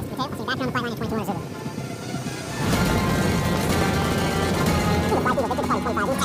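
From the start to the end of the clip, the audio is read two samples at a time (double speed): the playback side treats each consecutive pair of samples as a single frame, as if the stream were stereo or had samples twice as wide. Every second of material therefore plays in half a second, at 2x speed and a full 12 semitones, one octave, higher.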